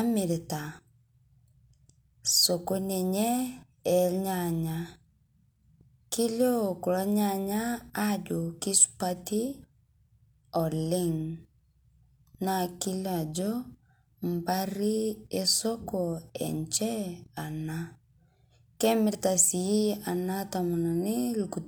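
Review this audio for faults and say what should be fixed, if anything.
Nothing here needs fixing, since I couldn't pick out a single fault anywhere in the recording.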